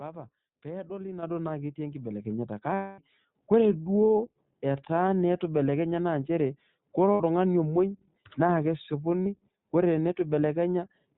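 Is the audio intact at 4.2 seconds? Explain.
No. At 4.2 s, as across the whole clip, the speech is coded with the iLBC codec. Each frame, consistent with 20 ms frames at about 15.2 kbps, codes its excitation independently, so the speech sounds plainly rough and synthetic. A spectrogram shows a hard ceiling with nothing above 4 kHz.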